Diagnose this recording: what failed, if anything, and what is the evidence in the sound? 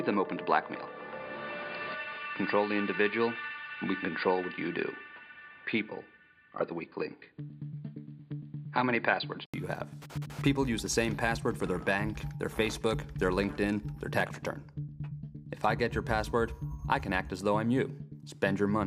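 Input switched to a poorer device, from 0.0 to 9.54 s: nothing reaches above 4.8 kHz, giving a dull, narrowband sound with its own faint noise floor, about 45 dB down. At 9.54 s an 80 ms silence precedes full-band audio at unchanged level, likely an input-device change.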